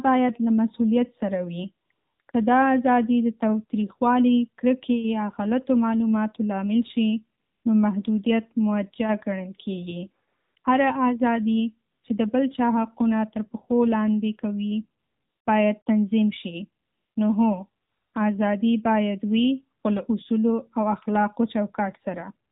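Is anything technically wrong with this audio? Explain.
Yes. Throughout, the speech has passed through the AMR narrowband mobile codec at 7.4 kbps. The 8 kHz sampling discards everything above 4 kHz, and the low bit budget for the vocal-tract model and its pulse excitation leaves the voice muffled, buzzy and plainly synthetic.

AMR comfort noise fills fourteen brief pauses between about 1.86 s and 22.5 s, lasting 20 to 460 ms. The longest runs from 15.00 to 15.46 s, just before "باید تنظیم". During these pauses the sender judged the talker silent and stopped sending speech frames, so the receiver substitutes a smooth synthetic noise that switches in and out in place of the real background.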